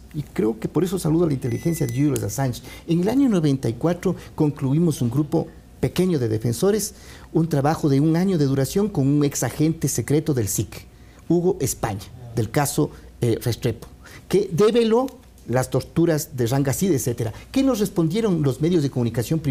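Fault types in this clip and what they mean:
No faults detected: nothing in the audio points to a recording, transmission or processing error.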